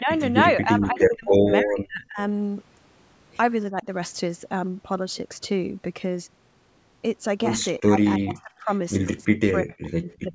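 Speech with repeated level dips, likely speech suppressed in double talk, at 0–0.22, 0.57–2.19, 3.71–3.86, 7.86–8.0, 8.18–8.7, 9.03–9.13 and 9.29–10.33 s. The drops range from about 10 dB to about 40 dB, deepest in the longer stretches. The echo canceller is treating near-end speech as echo and attenuating it.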